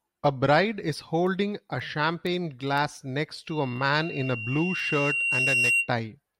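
Loudspeaker feedback squeal, 3.50–5.92 s: the microphone re-hears its own loudspeaker, so a 2.8 kHz tone swells over about two seconds, ending louder than the speech.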